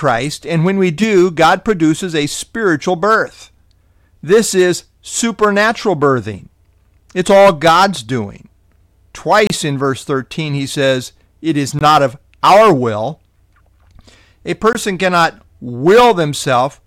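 Blocks of digital silence fall at 9.47 to 9.50 s (about 29 ms), 11.79 to 11.81 s and 14.73 to 14.75 s (20 ms each). The speech drops abruptly to silence and back with no fade, so each gap is a brief hole.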